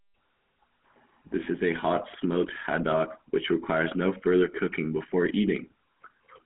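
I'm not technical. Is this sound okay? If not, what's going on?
No. The speech passed through the old GSM full-rate codec, a mobile-phone system that rebuilds the voice from a simplified model and drops everything above 3.4 kHz. Throughout, the voice sounds muffled, phone-like and plainly buzzy or gravelly.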